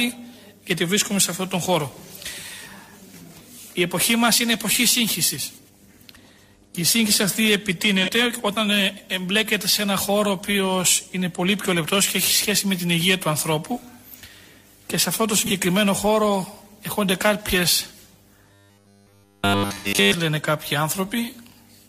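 There are short smeared, phasey patches at 8.03 to 8.09 s and 15.39 to 15.51 s, each consistent with a single lost AAC frame of about 43 ms. A longer patch at 19.71 to 19.87 s sounds more like two frames, about 85 ms, gone. That's AAC frame loss with concealment, where the decoder papers over the gap from the last good spectrum. From 18.54 to 20.14 s essentially the whole stretch turns into a rigid, metallic robotic buzz pinned at 100 Hz, likely from repeated short buffers, with roughly 10 ms of audio looped while the real signal gets skipped.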